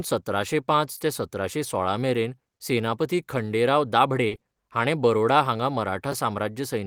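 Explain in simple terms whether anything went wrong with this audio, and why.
A few small network and playback hiccups show up in this speech clip.

Short concealed packet loss hits at 0.97–1.01 s, 4.27–4.33 s and 4.35–4.43 s. Bits of audio arrived too late, so the player stretched the previous sound to cover them, giving quick smears or wobbles.

Lost packet rebuilt from error correction covers 0.99–1.01 s and 4.31–4.33 s. Each time, a backup copy tucked into the next packet filled the hole, so it's rougher and hissier.

A repeated buffer shows up at 6.12 s. A tiny slice, fitting a roughly 5 ms buffer, plays two extra times, heard as a brief click or buzz.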